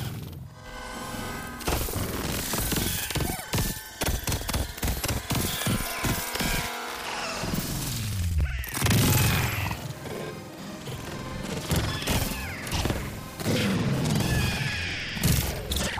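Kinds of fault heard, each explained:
Planar audio read as interleaved: each 93 ms block, which fits a 4096-sample block size, plays twice at double speed, left then right, so everything sits an octave high with a 10.8 Hz flutter. Unlike a sample-rate error, the overall pace stays correct.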